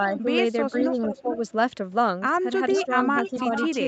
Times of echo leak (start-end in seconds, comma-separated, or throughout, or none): 0.09-0.18, 0.75-1.49, 2.69-2.85, 3.17-3.88